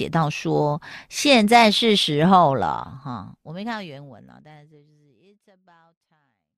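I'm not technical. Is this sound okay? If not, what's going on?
Yes, it's fine, with a gentle fade at the end.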